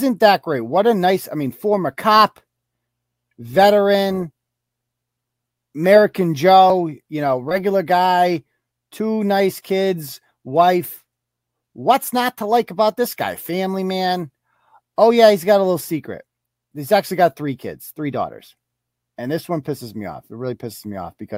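No technical faults are audible.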